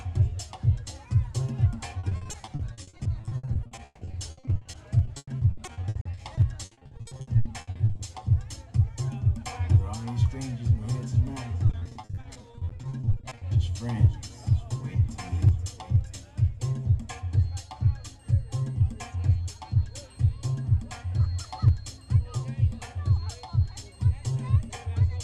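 From 1.99 to 8.01 s, and again from 11.67 to 13.43 s, the audio breaks up with repeated packet loss (robotic sound). Dozens of short holes open in quick succession, each papered over by extending the preceding sound. About a third of each stretch is concealed this way, with gaps up to 160 ms in the first and no longer than 40 ms in the second. The result is choppy, with pieces missing. A spectrogram shows smeared, frozen bands and broken onsets, and the waveform shows flattened, repeating segments.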